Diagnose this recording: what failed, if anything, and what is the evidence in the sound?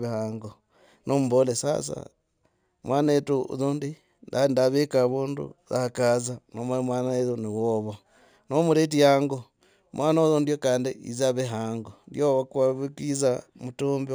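Sample-rate conversion by linear interpolation, likely 16 kHz raised to 44.1 kHz, causes imaging from linear upsampling: a dulled top and faint mirrored 8 to 16 kHz energy shimmering on sibilants.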